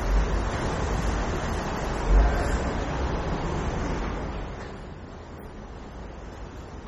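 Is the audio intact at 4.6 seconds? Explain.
No. At 4.6 s the audio carries MP3 compression damage, as it does throughout. Nothing sounds above 19.2 kHz. Weak frequency lines flicker between frames, giving a heavy watery swirl and smeared attacks. This likely points to a low bitrate near 32 kbps.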